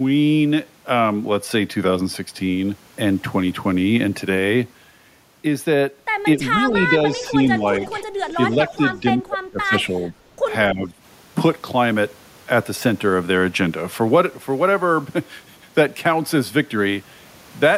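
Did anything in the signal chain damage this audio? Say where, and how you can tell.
Yes, in call processing. The speech dips at 6.36–7.39 s, 7.6–8.03 s, 8.36–10.22 s and 10.7–10.97 s. The drops are shallow at first and reach about 25 dB in the third stretch. This is speech suppressed in double talk, likely an echo canceller turning down the near talker while the far side was also speaking.

In the same span, a faint delayed copy of the speech surfaces at 6.76–6.80 s, 7.11–7.28 s and 7.83–7.89 s. It lags the original by 284 ms and sits about 15 to 20 dB below it. This echo leak is likely loudspeaker pickup that the canceller failed to remove, sent back down the line in short scraps.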